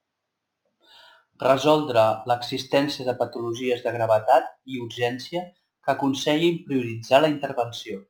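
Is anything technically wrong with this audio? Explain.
Yes. Crude rate conversion runs throughout: samples are repeated without filtering, consistent with a 44.1 kHz to 48 kHz change, leaving an inharmonic fizz roughly 30 dB below the speech.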